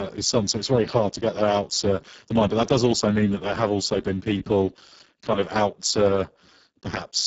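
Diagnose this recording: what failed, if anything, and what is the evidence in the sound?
The failure is at the codec stage. Throughout the speech the Speex codec has left it hoarse, noisy and edging toward robotic, which fits a very low bitrate of roughly 6 kbps. At that rate the CELP excitation gets too few bits, so voicing turns buzzy and grainy. Above 4 kHz there is only shaped hiss, and nothing above about 7.7 kHz. A plain low-pass filter would leave the voice clean but dull, not rough and synthetic like this.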